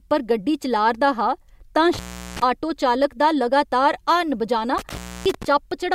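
Intermittent contact interrupts the speech from 1.93 to 2.42 s, after "हा तां" and before "आटो चालक दा लगातार", and again from 4.78 to 5.45 s, after "दा लगातार हार्न बजाना". A loose connection opens for about 0.38 s and 0.28 s, dropping the signal to faint hiss, with crackle as contact breaks and returns.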